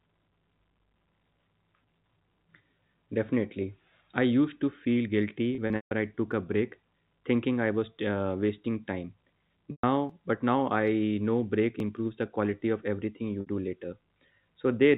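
From 5.55 to 5.91 s, packet loss with pitch repetition: 210 ms lost in bursts up to 150 ms, so the repeated pitch period buzzes briefly, then fades to silence before a cross-fade back. At 6.32 s, between "I took" and "a break thinking I", a slight forward skip of a few milliseconds, likely a dropped buffer (overrun) joining the audio directly. Pitch repetition returns from 9.71 to 9.84 s, covering 120 ms with a held, buzzy tone fading out. At 10.10 s, just before "but now I know", a jump of about 20 ms, likely another overrun. At 11.80 s, a third skip of about 10 ms, again likely an overrun. From 13.41 to 13.47 s, after "quality of everything you", a 60 ms loss is bridged by a short held, buzzy repetition. Throughout, the G.711 telephone band stops at 4 kHz.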